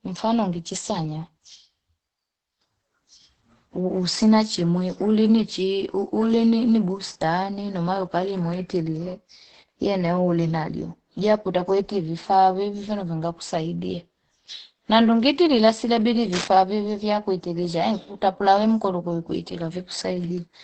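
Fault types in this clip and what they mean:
Opus compression: likely low-rate speech-mode coding. Muffled, hoarse speech with nothing above about 8.7 kHz, fitting roughly 12 kbps, without MP3-style swirling.
Cable scratch noise: a dense, uneven scratching burst from 16.33 to 16.48 s, a little below the speech level, likely a disturbed contact rather than a single click.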